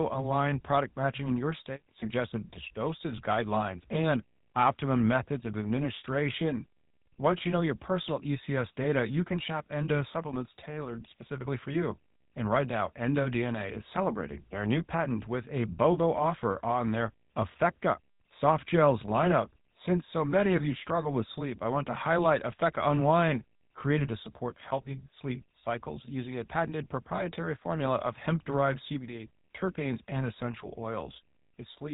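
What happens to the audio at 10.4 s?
At 10.4 s the speech sounds buzzy and gravelly, with nothing above 3.8 kHz. This is GSM full-rate codec damage throughout, consistent with a 13 kbps stream rebuilding the voice from sparse pulse excitation.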